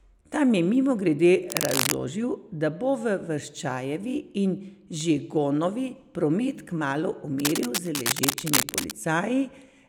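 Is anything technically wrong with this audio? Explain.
Yes. Cable scratch noise appears from 1.50 to 1.94 s, roughly as loud as the speech, and again from 7.39 to 8.96 s after "promet kmalu", somewhat quieter. These are dense, ragged bursts of scratching, likely from a worn cable or connector whose contact resistance jumps as it moves. On a spectrogram they show as broadband smears, and on the waveform as jagged, irregular spikes.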